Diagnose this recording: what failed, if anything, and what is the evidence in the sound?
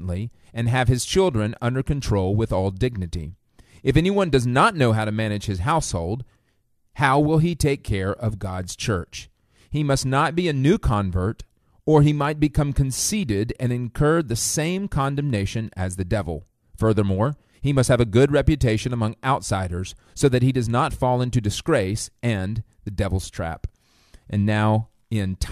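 Nothing in the recording chain shows a failure: the speech signal holds continuous timing throughout, with no audible defect pointing to any stage.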